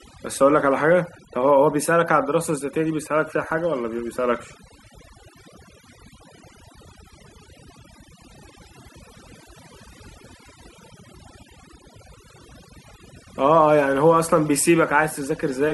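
From the start of the clip to the end, the speech carries the marks of overdone noise removal. The noise reduction was pushed too hard: any frequency band sitting close to the estimated noise floor is pulled far down or gated out, and the quieter components of the speech are removed along with the noise. Between phrases the background collapses to near silence scattered with twinkling specks.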